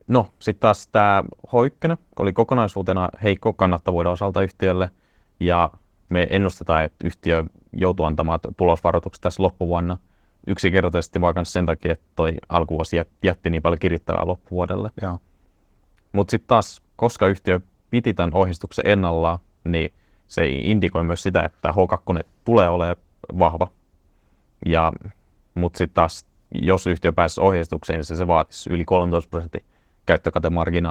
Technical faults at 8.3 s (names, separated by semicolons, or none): Opus voice compression